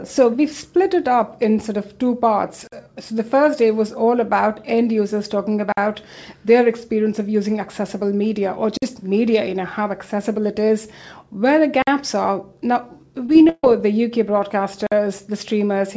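At 2.67, 5.72, 8.77, 11.82 and 14.87 s the audio drops out for 50 ms each time, a gap between chunks. The audio was delivered in 3-second pieces, and silence was left at each join. Nothing is lost, only interrupted. Unlike packet loss, these holes have no filler sound, and they recur on a steady clock of roughly three seconds.

From 13.26 to 13.64 s there is repeated packet loss that gives a robotic sound. Seven holes fall within that 0.38 s stretch, the longest 139 ms, and about half of it is patched by stretching the preceding sound. That patching is what makes it choppy, unlike the silent chunk gaps. The whole clip carries nothing above 8 kHz, which fits a G.722 call path at 64 kbps.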